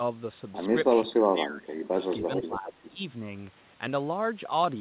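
From 1.04 to 2.02 s, the echo canceller likely could not tell simultaneous talk from loudspeaker echo and turned everything down. This speech suppressed in double talk makes the voice sink by roughly 25 dB. A milder dip of about 10 dB follows from 2.27 to 3.0 s. Overlapping it, from 2.33 to 2.9 s, comes an echo leak. One end's canceller likely failed to remove what its microphone picked up from the loudspeaker and sent it back. The result is a copy of the voice trailing by about 0.4 s, roughly 10 dB below the direct sound, within audio that the telephone codec limits to 4 kHz.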